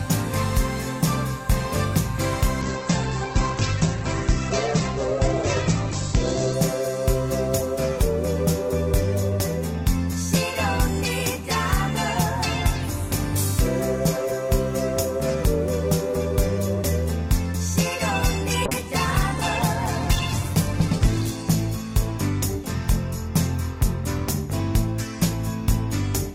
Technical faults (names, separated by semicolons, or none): call bitrate drop